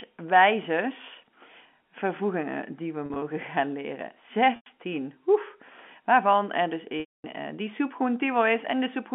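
Packet loss with pitch repetition occurs three times. At 3.06 to 3.22 s, after "vervoegingen die we", about 80 ms goes missing in short runs and the repeated pitch period holds briefly. At 4.56 to 4.66 s, before "oef waarvan er dus", 100 ms sounds buzzy and stretched. At 7.0 to 7.24 s, the 240 ms gap fades into silence.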